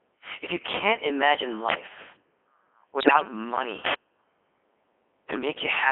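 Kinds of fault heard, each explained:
Codec 2 vocoder: Speech is rebuilt from pitch, voicing and spectral-envelope parameters, sounding robotic and buzzy within a 250 Hz to 3.4 kHz band, consistent with the 3.2 kbit/s mode.
Bit errors on digital voice radio: From 3.00 to 3.28 s, corrupted bits at a rate of a few percent scramble the vocoder parameters over about ten frames, producing jumps in pitch and level and warbling gibberish.
Uninitialised buffer: From 3.86 to 3.94 s, an 80 ms block of leftover memory plays as samples, heard as a sudden loud burst of harsh digital noise.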